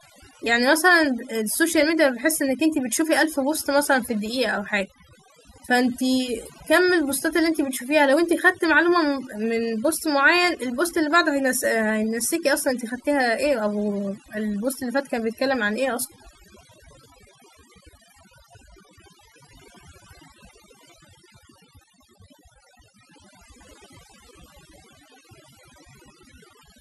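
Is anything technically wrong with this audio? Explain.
Yes. Throughout the speech there's overdone noise removal: the denoiser clamps bands near its noise estimate, leaving twinkly near-silence between phrases and taking quiet parts of the voice with it.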